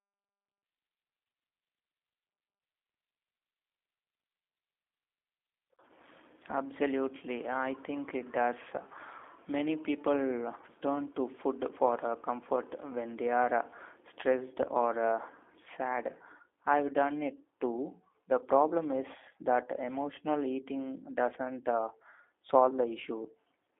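Speech squeezed through a G.729 codec the whole way, which fits the 8 kbit/s G.729A flavour. It's boxed into a telephone band of roughly 300 Hz to 3.6 kHz, and the pulse-and-filter resynthesis leaves it plainly rough and a bit synthetic throughout.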